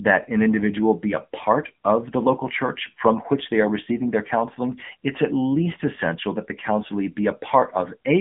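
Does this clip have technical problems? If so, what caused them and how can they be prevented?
Yes. The whole clip carries AMR narrowband mobile codec damage. The speech is confined to roughly a 150 Hz to 3.5 kHz phone band, and nothing gets through above about 3.7 kHz, so it sounds boxed in and dull. The codec rebuilds the voice from a vocal-tract model fed with sparse pulses, and the buzzy, synthetic edge you hear fits one of AMR-NB's lower modes, around 8 kbps. To prevent it, record or route the call over a wideband path such as AMR-WB or a VoIP codec instead of a narrowband mobile link.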